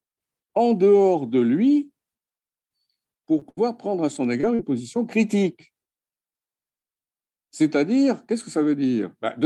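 At 3.39 s the speech has a short concealed packet loss. About 20 ms of audio never arrived in time, and the decoder bridged the hole by extending the preceding sound for roughly 18 ms before crossfading back into the received signal. It registers as a brief smear in the speech.

At 3.49 s, ending near 3.59 s, comes a burst of packet loss with 80 ms missing. The receiver stretched the last sound across about 75 ms, attenuating it as the gap lengthened, so a held buzz or fading hiss replaces the real audio. Playback then picks up further along, and whatever fell inside the gap is simply absent.

Two more short concealed packet losses follow, at 4.41 to 4.45 s, where about 20 ms was lost and filled, and at 4.55 to 4.61 s, where 40 ms went missing and was concealed over the same length. In both, continuing the prior sound leaves a brief smear or wobble. The longer second one is more likely to swallow a short consonant.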